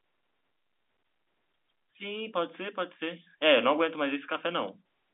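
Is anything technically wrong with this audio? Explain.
Yes. From 1.98 to 4.73 s, automatic gain rising occurs: the gain control judged the input too quiet and raised its gain about 6 dB, so speech and background swell together. The G.711 telephone coding limits the sound to the 250 Hz to 3.6 kHz line band.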